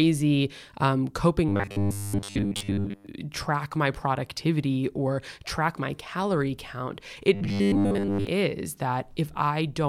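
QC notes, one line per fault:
1.49–3.07 s and 7.35–8.27 s, robotic sound from repeated short buffers: the speech becomes a rigid metallic buzz locked at 100 Hz, ending just before "track my productivity or" and starting just after "track my calorie count". A 10 ms slice is likely being replayed while most of the real audio is skipped. Unlike a pitch shift or flanging, the buzz pitch stays fixed instead of following the voice, and there are no silent gaps as in dropouts.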